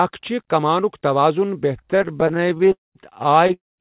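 A speech recording carried over a narrowband call link, with nothing above 4 kHz, which fits G.711-style telephone coding. Just after "چھِ کمانُک توازُن", from 1.82 to 2.72 s, repeated stalls (stutter) break the flow with many tiny held fragments, none longer than 18 ms, concealing about a third of that span. Unlike a single freeze, these are frequent brief stretches, so the speech drags and judders rather than stopping. A call audio freeze follows from 2.72 to 2.97 s, likely from packets held up in transit. The last sound is extended by about a quarter second, most of it fading to silence, then speech resumes where it stopped with nothing lost. At 3.47 to 3.51 s, a short stall from a late packet holds one sound for about 21 ms with a slight buzz or dip. It is a single stretched moment rather than a fade to silence. A second call audio freeze runs from 3.53 s to the end at 3.80 s, filling about 0.27 s, mostly silent, with the same fading continuation.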